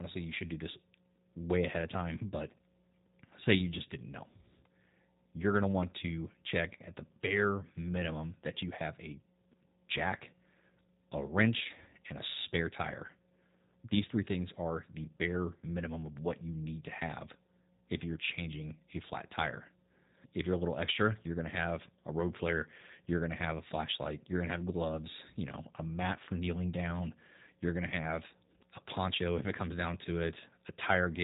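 From start to finish the speech has passed through a G.729 codec, which rebuilds each 10 ms frame from a vocal tract filter, a pitch predictor and a handful of pulses rather than sending the waveform itself. The damage is plainly audible: the voice sounds rough and faintly synthetic, and nothing above 3.8 kHz survives, so sibilants and consonant edges are dulled. The coarseness fits a low-rate coder running at around 8 kbit/s.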